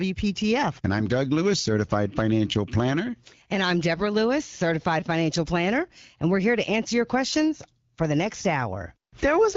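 At 5.00 to 5.02 s, just before "financial planner", there is a repeated buffer. New audio arrived late, so one piece of about 5 ms was played several more times, which fits a 256-sample buffer. About 20 ms of speech is lost, heard as a brief buzz.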